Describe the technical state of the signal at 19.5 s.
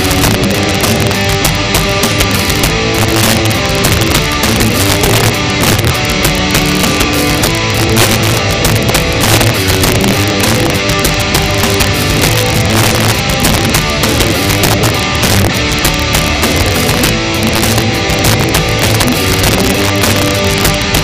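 Sharp cracks break out on the loudest peaks at 19.5 s, as they do across the whole clip: integer overflow. Gain pushed the signal about 7 dB past the integer limit, and the small share of samples over it, roughly 1.5 percent, wrap to the opposite sign instead of being limited.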